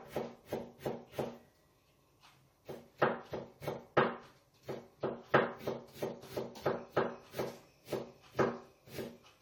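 From start to end the sound carries generation loss: a swirly, hollow smear with softened attacks, worse than one pass at around 64 kbit/s AAC would give. It likely comes from roughly four re-encodes, with artefacts piling up across shifted frame grids rather than a single narrowed band.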